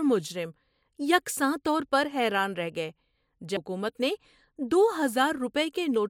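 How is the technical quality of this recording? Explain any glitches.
The recording has one glitch, a CD skip at about 3.57 s in the speech. The player's laser was knocked or thrown off by a flaw and landed on a different turn of the disc's spiral, so playback briefly muted, for only a few milliseconds, and resumed from another point on the disc. You hear it as a tiny tick followed by an abrupt jump in the speech, forward or back by one or more disc turns of roughly 0.1 to 0.3 s each.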